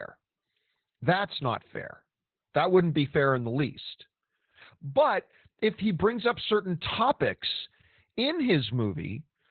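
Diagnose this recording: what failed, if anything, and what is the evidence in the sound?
The codec's the culprit here: Opus voice compression, heavily damaged, across the whole clip. Nothing survives above 4.3 kHz, so the speech sounds narrowband, muffled and hoarse, with a robotic edge from SILK's coarse excitation coding, which fits a bitrate around 8 kbps.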